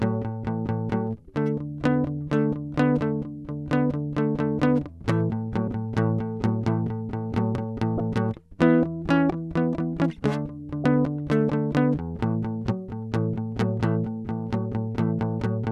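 Music, with three brief bursts of damaged data in the compressed stream at 5.65–5.68 s, 7.97–8.00 s and 10.82–10.85 s. In each, corrupted bytes cause the decoder to misread frames and lose sync while it hunts for the next valid header, producing a short chirp or blip about 34 ms long.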